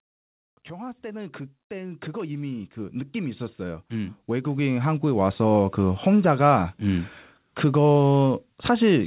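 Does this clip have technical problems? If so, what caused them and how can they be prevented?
Yes. Automatic gain rising runs from 0.67 to 5.68 s: the gain control judged the input too quiet and raised its gain by about 19 dB over five seconds, so the voice and the background noise swell together. Prevent it by setting microphone level correctly beforehand or using a fixed gain.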